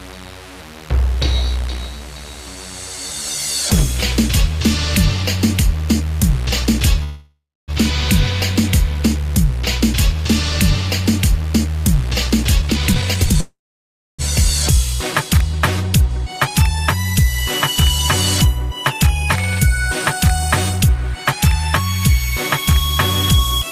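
Call audio freeze at 7.03 to 7.71 s: the sound halts and its last moment is stretched into a fading buzz, then about 0.28 s of silence, before resuming exactly where it stopped. This is likely delayed packets draining the jitter buffer. Nothing is lost, but 645 ms is inserted and the delay grows by that amount.

Jitter buffer speed-up at 12.63 to 13.34 s: the receiver works off a backlog by cutting many short pitch-period slices in quick succession, removing around half a second. The passage plays at 163% speed with unchanged pitch and sounds noticeably rushed.

Call audio freeze again at 13.40 to 14.22 s: 781 ms of filler is inserted, a brief fading continuation followed by about 0.65 s of silence. The audio then picks up from its stopping point with nothing missing.

Timecode bleed at 14.57 to 17.78 s: linear timecode running at 24 frames per second leaks in from an adjacent track or cable. 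Its square wave toggles between tones near 1 kHz and 2 kHz, producing a chirping warble roughly 30 dB below the program.

Jitter buffer speed-up at 18.45 to 21.33 s: a gentler catch-up trims only about a tenth of a second across nearly three seconds. Playback runs at 103% speed with pitch intact, so the hurrying is slight.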